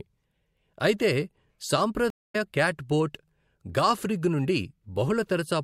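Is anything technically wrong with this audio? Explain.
Yes. At 2.10 s the speech drops out in a stream reconnect that lasts until about 2.36 s. The connection to the server broke, so the player stopped receiving data, re-established the link and started a new decoder partway through the stream. What you hear is about 215 ms of silence. The speech then picks up at a point somewhat later than where it stopped, roughly 150 ms further on, so a short stretch is simply missing rather than delayed.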